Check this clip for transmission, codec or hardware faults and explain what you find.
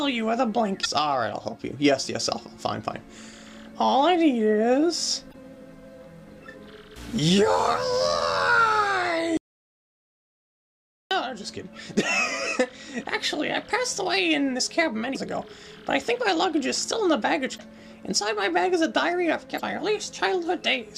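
Two kinds of fault are present: damaged data in the compressed stream, and one dropout to silence.

Damaged data in a compressed stream occurs five times: 0.80–0.86, 5.29–5.35, 15.11–15.17, 17.54–17.60 and 19.55–19.61 s. Each lasts under 60 ms. Corrupted bytes make the decoder misread frames and resynchronise. Each is heard as a brief chirp or blip.

An audio dropout to silence runs from 9.37 to 11.11 s. About 1.74 s of sound is lost. The gap is silent with no background tone. The sound cuts off and returns mid-flow. A lost input signal, with silence still being written, is the likely cause.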